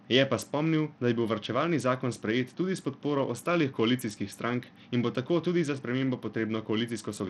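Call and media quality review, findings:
Bluetooth SBC compression, likely cause, throughout: small bit pool, sound fits about 80 kbps. Upper sub-bands starved of bits, rest coarsely quantised. Speech treble drops out and flickers; gritty noise and aliasing ride on the voice, plainly audible.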